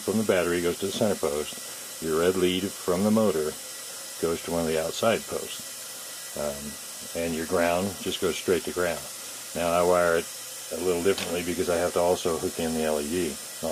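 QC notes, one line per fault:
No technical faults can be heard anywhere in the signal.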